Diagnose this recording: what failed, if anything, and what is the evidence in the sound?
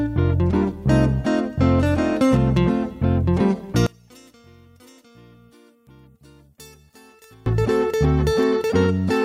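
One channel inverted, from 3.87 s to 7.46 s: the summed sound drops by about 30 dB and turns faint, then returns at full level. The likely cause is reversed polarity on one stereo leg in the analogue wiring, so everything common to both channels cancels in mono.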